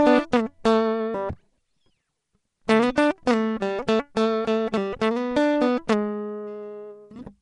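Throughout this music clip the sound is rough and smeared, with a hissy halo and no content above 10.7 kHz, likely Nellymoser compression at around 44 kbps.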